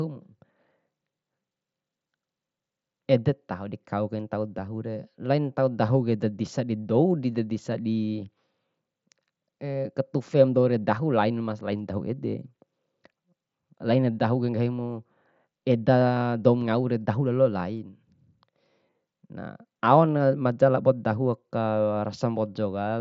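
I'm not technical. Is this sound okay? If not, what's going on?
Yes, nothing stood out as a problem on listening to this speech, which sounds the way speech normally does over a Bluetooth headset.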